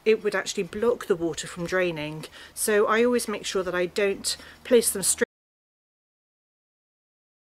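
The sound stops abruptly at 5.24 s and never comes back. From there to the end there is an audio dropout to silence. The gap runs about 2.3 s. It is silence, with no room tone or background hiss left. The cut lands mid-flow rather than at a natural pause. The likely cause is a lost input, such as a disconnected device or a failed link, while recording carried on writing silence.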